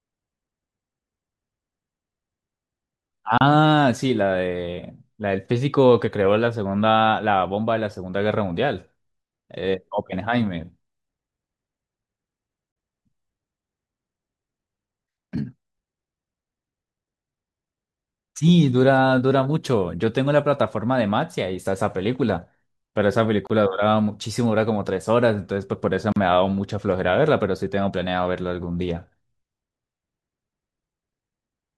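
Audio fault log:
3.38 s, 12.72 s, 23.47 s, 26.12 s: gap at a join of encoded pieces. Silences of 32, 42, 29 and 40 ms with smeared edges break the speech, which then resumes where it stopped. Separately encoded pieces were joined with each one's start-up delay and last-frame padding left in.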